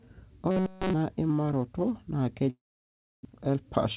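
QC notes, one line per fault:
0.51–0.93 s, robotic sound from repeated short buffers: just before "imaroto na" the sound becomes a rigid metallic buzz at 188 Hz, likely from a roughly 5.3 ms buffer being replayed over and over instead of new audio. A spectrogram shows evenly spaced harmonic stripes; the waveform shows identical repeating cycles.
2.50–3.27 s, long network dropout: after "imaroto na" the audio stops arriving, and the last sound is stretched into a fading buzz before about 660 ms of silence. Roughly 640 ms never plays, likely from a network outage. The spectrogram shows a decaying smear, then an empty band; the waveform goes flat.
3.35–3.64 s, jitter buffer speed-up: after the gap, the receiver trims its backlog by cutting short pitch-period slices, about 50 ms in total, so the sound runs at 116% speed without a pitch change and feels hurried. The spectrogram shows compressed timing with unchanged harmonic spacing; the waveform shows small splice points.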